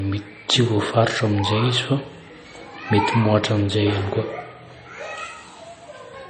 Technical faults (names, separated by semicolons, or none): MP3 compression